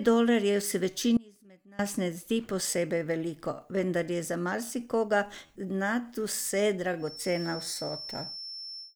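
Speech, with two faults. An audio dropout to a faint residue runs from 1.17 to 1.79 s, after "dolarjev se" and before "ne zdi posebej veliko". The speech cuts abruptly for 0.62 s, leaving only a faint sound roughly 25 dB down. The likely cause is a brief loss of the signal while the path after the break stayed live. From 6.96 s to the end, a feedback whistle appears. It is a thin, steady tone at 5.4 kHz, roughly 15 dB below the speech, swelling and fading slowly in level. It likely comes from a loudspeaker-to-microphone loop held just short of runaway.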